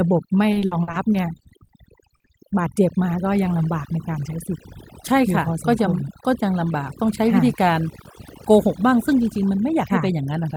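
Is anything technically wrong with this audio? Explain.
Yes, there are four faults.

Overdone noise removal runs through the whole clip. Bands near the noise floor are cut away, leaving a background that drops and breaks up into twinkling specks. Unlike codec loss, it is tied to quiet moments.

Repeated packet loss (robotic sound) runs from 0.51 to 2.52 s. Short holes, the longest about 60 ms, are patched by stretching the preceding sound, so about 17% of the stretch is filled-in audio. It sounds choppy, not simply muted.

Timecode bleed runs from 3.55 to 5.51 s. A square-wave code leaks in at about -40 dB, switching between roughly 1 and 2 kHz at a rate that fits 24-frame timecode. It is heard as a chirping warble rather than a steady hum.

Jitter buffer speed-up runs from 3.95 to 4.31 s. The receiver trims about 50 ms of pitch periods to drain excess delay, so the speech runs at 110% speed and sounds hurried. 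The pitch stays unchanged, unlike a playback-speed error.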